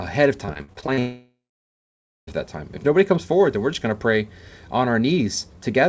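A speech clip. From 0.46 to 0.99 s, packets went missing again and again: eight separate holes, the longest 48 ms, each patched by stretching the sound that came before it, so that roughly a third of this span is filled-in rather than real audio. This repeated packet loss (robotic sound) makes the speech choppy, with small pieces of it gone and replaced by a synthetic continuation. From 0.99 s the stream stops entirely until 2.29 s, about 1.28 s, which is most likely a long network dropout. The receiver first carries the last sound forward as a fading buzz or hiss, then gives way to about 0.91 s of silence, and speech resumes at "that time" with the lost portion never recovered. The audio also passed through the G.722 call codec, so nothing is heard above 8 kHz.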